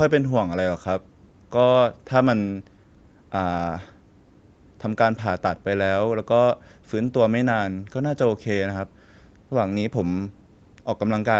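No technical faults occur at any point in the speech, so there is nothing to describe in time order.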